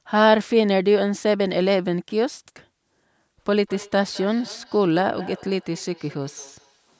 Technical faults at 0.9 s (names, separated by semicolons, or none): none